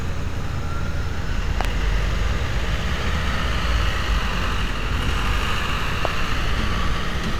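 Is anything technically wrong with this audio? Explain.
Yes, there are two loud pops. At 1.61 to 1.67 s there's a quick double pop, and a single one at 6.05 to 6.07 s, each roughly 15 dB above the sound, which carries on underneath. The likely cause is a voltage spike from a plug, switch or static.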